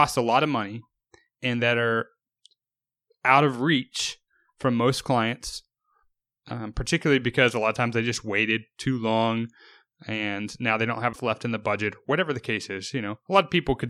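A brief disturbance at 11.09 to 11.16 s, between "and now they don't" and "left in the budget": damaged data in a compressed stream, which the decoder misread before resynchronising.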